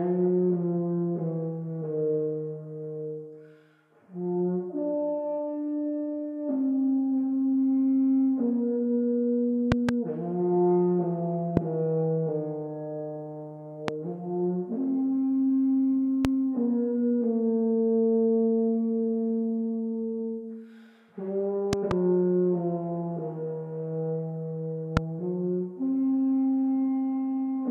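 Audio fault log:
9.72–9.91 (two), 11.57–11.59, 13.88–13.91, 16.25–16.27, 21.73–21.93 (two) and 24.97–24.99 s, loud pop: sharp thumps around 20 dB above the sound, which continues underneath, likely from a voltage pulse such as a plug, switch or static. Each shows as a tall waveform spike and a thin broadband vertical stripe on a spectrogram.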